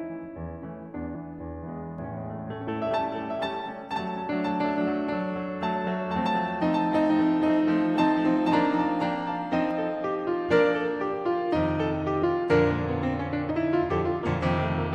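Doubled audio track from 1.98 to 9.71 s: the music is likely captured twice, with a dry second copy about 5 dB quieter trailing roughly half a second behind, starting and stopping abruptly. Compressed frames skipped at 2.67, 12.22 and 13.49 s: each time a few 23.2 ms frames, roughly a tenth of a second, go unplayed, so the music jumps ahead.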